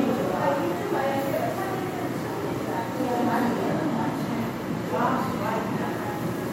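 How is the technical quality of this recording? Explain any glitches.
Nothing in the recording stood out as a technical problem on listening.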